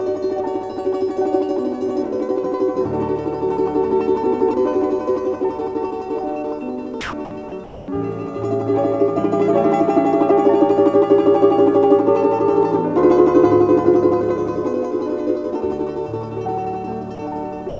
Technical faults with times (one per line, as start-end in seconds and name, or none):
7.01-7.88 sound dropped by the voice detector
17.15-17.18 sound dropped by the voice detector
17.69-17.79 sound dropped by the voice detector